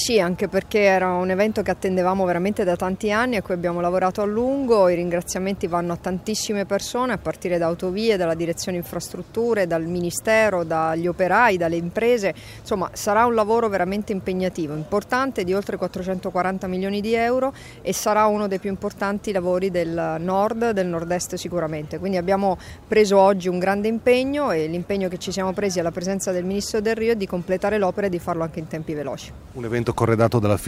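Nothing in this one trips a fault, so there's nothing to point to anywhere along the way.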